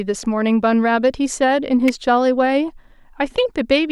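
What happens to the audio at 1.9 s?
A sharp, brief snap lands on top of the speech at 1.88 s, peaking at about -10 dBFS. It is an electrical switching spike, likely a nearby switch, motor or static discharge arcing and inducing a short burst of interference onto the audio line.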